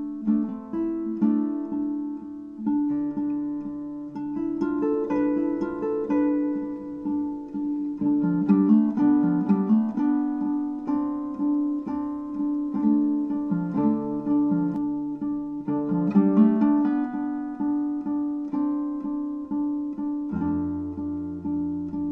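From 4.94 s to 14.76 s a doubled audio track appears: a full-band copy trails by about one second at roughly equal level, likely from a slower second capture path. Unlike echo, it has no decay or room colour and starts and stops abruptly.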